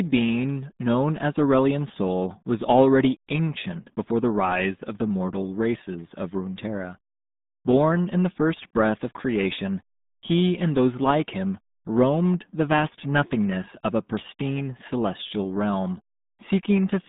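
RealAudio 14.4 codec, throughout: the speech is squeezed into 150 Hz to 3.7 kHz with nothing above 3.8 kHz, heavily muffled and gargly, which fits an 8 kbit/s dial-up coder.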